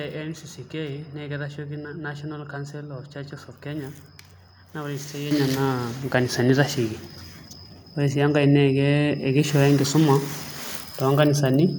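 At 5.31 s the microphone volume stepped up by about 8 dB in one step, so speech and background jump louder together, a sudden waveform envelope step.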